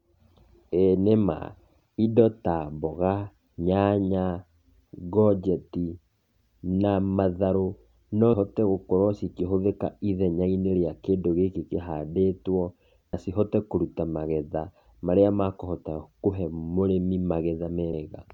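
The recording was likely made in 5-second chunks, with a short piece of audio lost each time one chunk closed and the next opened. The result is audio missing between chunks: the speech jumps forward abruptly at 8.33, 13.13 and 17.93 s, with roughly a fifth of a second gone at each joint. The two sides meet with no gap, so these are sudden skips rather than pauses, recurring at a steady spacing just under 5 seconds.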